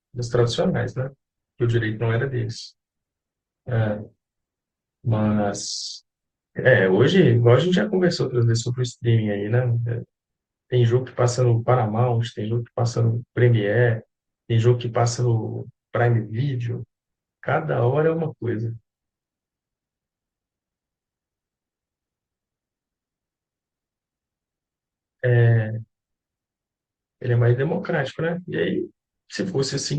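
An adaptive stream starting at a low bitrate: the player opened on a lean version, consistent with roughly 16 kbit/s Opus, then stepped up near 64 kbit/s at 6.0 s. Until then the speech lacks treble and carries stronger codec artefacts, clearing abruptly without any gap.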